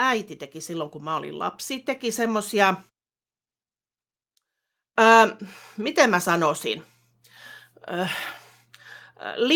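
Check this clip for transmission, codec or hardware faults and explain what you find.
There's one fault here: automatic gain rising, from 0.66 s to about 2.81 s. The automatic gain control decided the incoming speech was too quiet and slowly wound its gain up, by about 4 dB over roughly two seconds. Because it's the whole signal being boosted, the voice and the background noise swell together, so you hear the room and the speaker get gradually louder in step rather than a sudden jump.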